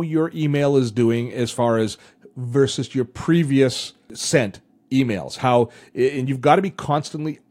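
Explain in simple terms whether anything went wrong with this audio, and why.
Nothing went wrong with this audio, so there is no problem to explain.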